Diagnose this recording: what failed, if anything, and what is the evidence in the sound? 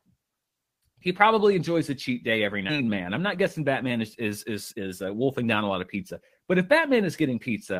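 Network and jitter buffer stage: skip ahead. Right after "a cheat day every", at 2.69 to 2.71 s, the speech jumps forward. Roughly a second and a half of talk is missing. Nothing fills the hole. The two sides are joined directly, with no silence between them. Audio was dropped in transit or discarded when the jitter buffer overflowed, while later audio was already queued. The receiver simply played on from the next available material.

Jitter buffer stage: jitter buffer speed-up. From 2.81 to 6.21 s the speech runs at 109% speed. The pitch stays the same, but the delivery sounds hurried. Across that stretch, roughly a third of a second of audio is removed. The buffer was holding more audio than its target. To pull the delay back down, the receiver cut out short pieces of one or a few pitch periods, over and over, until the queue shrank.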